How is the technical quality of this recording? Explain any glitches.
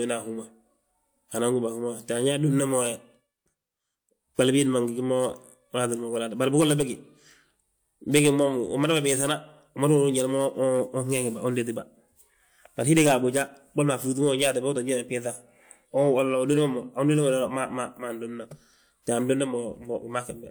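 No technical faults are audible.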